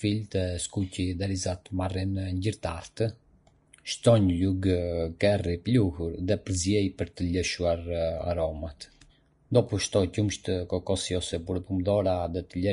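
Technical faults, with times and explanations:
Throughout, Vorbis compression: nothing above 10.6 kHz, and the treble turns hissy and grainy rather than merely dull, which points to a stream of likely about 35 kbps.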